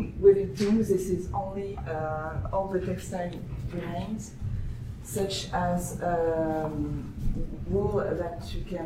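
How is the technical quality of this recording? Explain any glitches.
Nothing stood out on listening; no glitches were heard anywhere in the recording.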